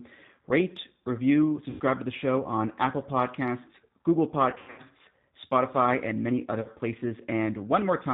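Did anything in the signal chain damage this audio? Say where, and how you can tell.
Yes. The G.729 codec, at the codec stage, is audible throughout the speech at 8 kbit/s. Nothing above 4 kHz survives, so the sound is narrowband and dull, and there is a plainly audible rough, slightly synthetic texture. That comes from the decoder rebuilding each 10 ms frame from a vocal tract filter, a pitch predictor and a handful of pulses rather than the actual waveform. Any background noise warbles.

VoIP packet loss concealed by the speech codec, a network-stage fault, occurs at 1.70–1.82 s, 4.50–4.82 s and 6.61–6.69 s. In each place the speech smears into a buzzy or noisy tone that fades, because the decoder is extrapolating from its last pitch and filter while turning the gain down. About 100 ms goes missing at 1.7 s. Around 4.5 s roughly 220 ms is lost in bursts spread over 280 ms, and the longest gap is 100 ms. 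At 6.6 s the loss is about 40 ms. These lengths fit 20 ms packets.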